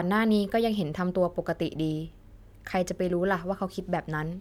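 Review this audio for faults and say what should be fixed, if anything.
No faults can be heard in this speech recording. Nothing needs to be fixed.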